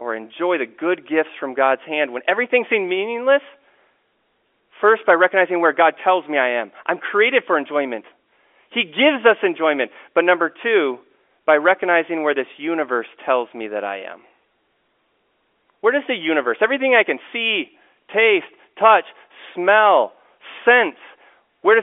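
Nothing goes wrong anywhere in this speech recording; it simply carries the narrow band of an ordinary G.711 telephone line, roughly 300 Hz to 3.5 kHz, just as that format always sounds.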